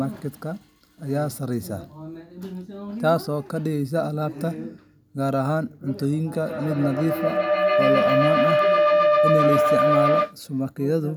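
At 6.33 s a feedback howl starts building in this speech and keeps going until 10.4 s. Two devices on the same call in one room are feeding each other: the mic picks up the speaker, sends it round again, and each trip comes back louder. The loop settles on a tone around 700 Hz that repeats roughly every 150 ms and ends up about 5 dB above the speech.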